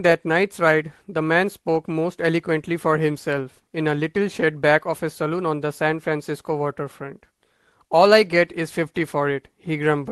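There are no technical faults to describe in this speech, which has come through a normal call path and is band-limited to about 12 kHz.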